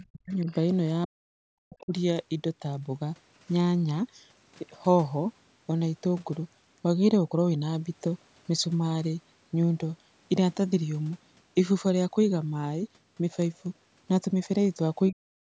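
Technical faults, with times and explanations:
0.00–0.48 s, 1.05–1.27 s, 1.64–1.93 s and 15.1–15.56 s, speech suppressed in double talk: most likely the echo canceller mistook overlapping far-end talk for echo and clamped the near-end path, so the speech sinks by roughly 40 dB or breaks up in fragments.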